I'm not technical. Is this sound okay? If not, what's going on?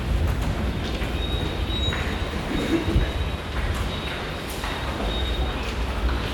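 Yes, it's fine: nothing in it stands out as a problem, so you can relax about this one.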